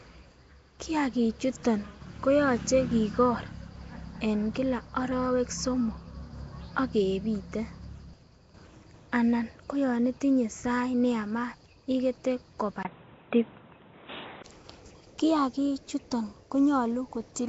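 Speech clip carrying plainly audible codec damage from start to end, with the rough, hissy halo and smeared, underwater quality of Nellymoser compression as the likely cause. That codec spends a fixed two bits per sample on short blocks, so bands too weak to earn bits are replaced with noise, and the result here fits a rate near 32 kbps. Nothing is present above 7.7 kHz. From 12.83 to 14.44 s the sound changes character, and the likely cause is the input switched to a poorer device partway through recording. A gap of about 20 ms marks the switch at 12.83 s. During that stretch the band stops at 3.8 kHz, the level shifts by around 5 dB, and a different background noise appears, sitting roughly 35 dB below the signal, before the original input returns at 14.44 s.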